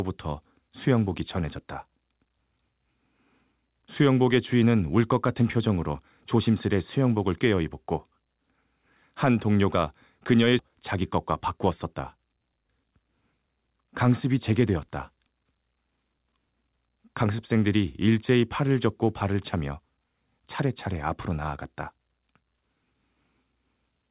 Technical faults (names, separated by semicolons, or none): skip ahead; jitter buffer speed-up